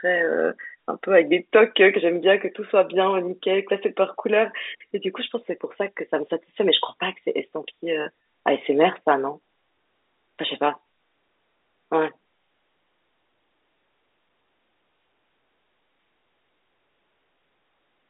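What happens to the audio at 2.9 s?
Nothing goes wrong at 2.9 s: the speech carries on intact there, heard through the narrow telephone band of its G.711 coding.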